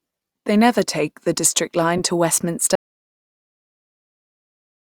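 A speech clip with two separate faults. Around 1.98 to 2.01 s, a corrupt frame was decoded: flipped bits inside the compressed data reached the decoder, which played them back instead of concealing them, so misread codes and gain values sent energy to the wrong frequencies. In this clip that gives a short glitch of roughly 40 ms, about the length of a couple of damaged frames. From 2.75 s the audio drops out to silence and stays silent through to the end of the clip. The signal stops mid-flow and is replaced by silence, with no room tone or noise floor underneath. That points to a lost input, likely a disconnected device or a failed link, while the recorder kept writing, and any speech after that moment is gone.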